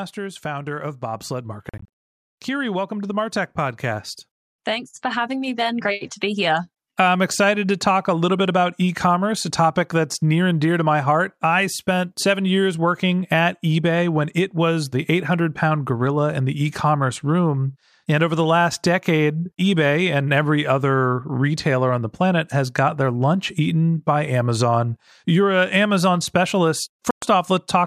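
From 0.15 to 4.11 s the level climbs by about 6 dB. This is automatic gain rising: the gain control judged the input too quiet and turned it up step by step. Voice and background noise swell together over several seconds. That joint, gradual rise sets it apart from someone simply speaking louder, where only the voice would grow.

Inside that rise, between 1.69 and 1.88 s, the sound breaks into a cluster of abrupt silent gaps spread over about 0.32 s. Together they remove about 0.19 s of audio, and the longest single gap lasts about 44 ms. The likely cause is a Bluetooth dropout: packets reached the headphones too late and were discarded. When the sound returns, it is further along, as if it had kept playing through the gaps. That skip forward is what tells it apart from a stall or pause, which would pick up where it left off.

A second gain rise of about 4 dB runs from 4.66 to 6.67 s and ends just before "I'm excited to talk". 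Again the background lifts with the voice, so a change in delivery doesn't explain it.

From 27.11 to 27.22 s there is one sharp-edged hole of about 0.12 s. Afterward the sound resumes further along, again as if it had played on.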